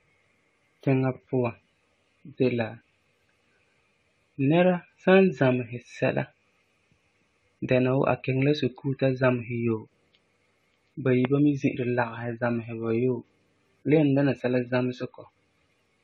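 Speech with generation loss throughout: the sound is swirly, smeared and hollow, with blurred consonant attacks and nothing above about 14.9 kHz. It likely comes from around ten successive AAC-LC passes at a rate that fits 64 kbit/s, each re-quantising on a shifted frame grid.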